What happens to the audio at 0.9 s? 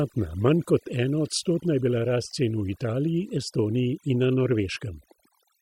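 A corrupt frame decoded at about 0.87 s, just before "enoodstotna je bila rast". Damaged bits in a single compressed frame were played back as if valid, so misread gains and codes put energy in the wrong frequency bands for that one frame's length. The result is a brief, faint blip or chirp, very quiet at roughly -50 dBFS.

The same moment also carries the overdone noise removal heard throughout the clip. A noise reducer set far too aggressively drives individual frequency bands down or off whenever they come near its noise estimate, taking the quieter parts of the speech with them. Around 0.9 s this leaves near-silent gaps dotted with twinkling specks.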